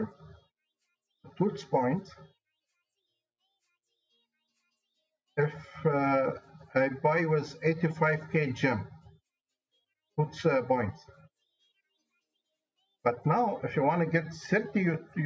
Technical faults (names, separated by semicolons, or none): none